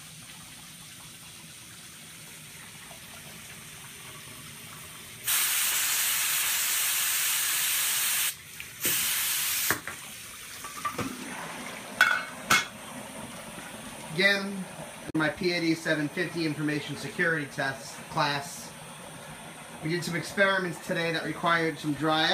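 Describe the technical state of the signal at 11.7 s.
At 11.7 s the signal is intact, with no dropout, distortion, glitch or other technical fault present at that point.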